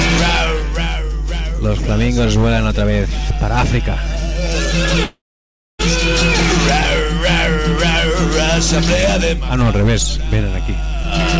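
A steady low tone at 50 Hz, with a few low harmonics, runs under the whole clip, roughly as loud as the sound itself, while the top end stops at 8 kHz as expected from the G.722 call path. This is mains hum: a ground loop or a nearby transformer has let the power line's frequency leak into the signal, so the tone stays fixed in pitch and level whatever the sound above it does.

From 5.04 s to 5.81 s the audio stops moving forward. The last sound is briefly held as a fading buzz or hiss, then about 600 ms of silence follows, and the audio picks up again exactly where it left off, with nothing skipped. This is a call audio freeze, likely caused by packets being held up in transit until the jitter buffer ran dry. The receiver filled the 752 ms wait, adding that much delay.

In the final moments, from 11.03 s to 11.38 s, the sound rushes ahead at about 124% of normal speed while its pitch stays the same, giving it a hurried quality. 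This is a jitter buffer speed-up. The buffer was holding more audio than its target, so the receiver trimmed out short pitch-period pieces one after another, about a tenth of a second in total, to bring the delay back down.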